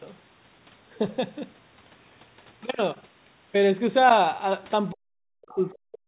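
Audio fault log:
4.91–6.07 s, speech suppressed in double talk: the echo canceller likely confused near and far talkers and pulled both down, so the speech sinks by up to about 40 dB until the end.
5.49–5.54 s, other side's voice leaking through: residual loudspeaker echo, likely missed by the echo canceller, surfaces as a brief scrap roughly 30 dB below the speech.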